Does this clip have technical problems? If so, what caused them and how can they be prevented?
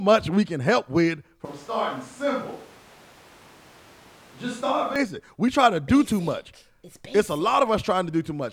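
Yes. From 1.45 s to 4.96 s, right after "we can help with", the speech abruptly turns roomy and hollow, loses low end, drops by about 5 dB, and carries background noise only about 20 dB below the speech. It snaps back just as suddenly at 4.96 s. This is a switch to a distant microphone, likely caused by the close microphone's signal dropping out so that a farther pickup, such as a camera mic, filled the gap. Prevent it by securing and monitoring the close mic's connection and recording it to its own isolated track as a backup.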